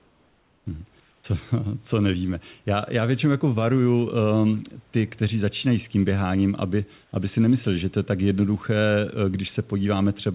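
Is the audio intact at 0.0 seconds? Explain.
No. From 0.0 to 0.66 s, comfort noise replaces the room background: a steady, featureless hiss about 2 dB quieter, likely from discontinuous transmission during silence.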